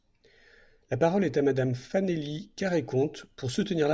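No technical faults can be heard anywhere in the recording.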